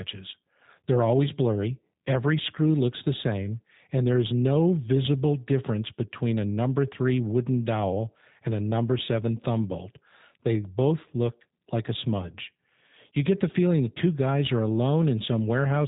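G.729 codec damage runs from start to finish: the speech has been rebuilt from a vocal tract filter, pitch prediction and a few pulses per frame, which fits an 8 kbit/s stream. Nothing passes above 3.8 kHz, and the voice sounds plainly rough and synthetic.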